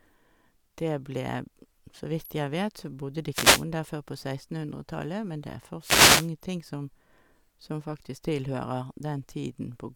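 A short swish of static washes over the speech from 3.31 to 3.65 s, and again, longer, from 5.80 to 6.30 s. These are wireless microphone noise hits: the FM radio signal faded as reflections cancelled, letting receiver noise rise over the voice.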